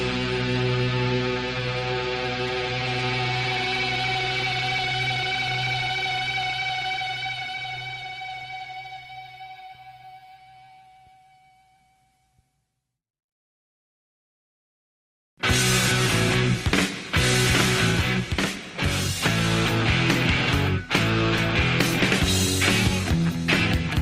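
Nothing goes wrong anywhere in this one, so there's no fault to point out at any moment in the audio.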